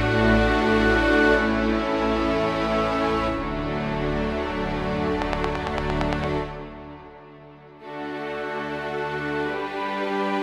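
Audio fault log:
5.22–6.25 s, train of clicks: about ten evenly spaced ticks at 8.8 per second, peaking well above the audio, likely interference or a faulty connection.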